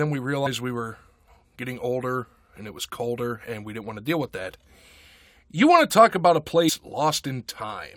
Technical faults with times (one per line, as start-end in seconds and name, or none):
0.45 compressed frames skipped
1.61 compressed frames skipped
6.68-6.70 compressed frames skipped